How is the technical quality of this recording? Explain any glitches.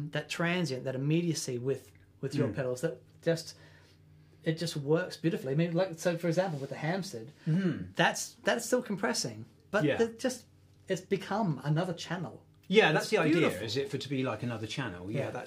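No glitches turn up anywhere in this recording, so there is nothing to explain about its technical quality.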